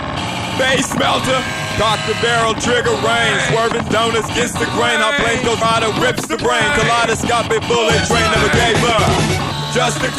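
The sound jumps abruptly at 1.71 s and again at 5.61 s, each time skipping roughly a tenth of a second and butting the two sides together with no gap. That's likely audio missing between chunks, with the recorder dropping a slice at each roughly 4 s chunk boundary.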